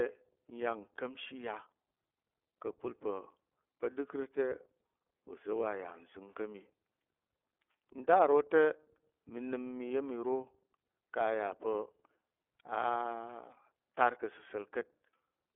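iLBC codec damage runs through the whole clip: the speech is squeezed into a 300 Hz to 3.5 kHz telephone band and coded frame by frame, each frame standing alone, leaving a plainly rough, synthetic edge. This fits 30 ms frames at around 13 kbps.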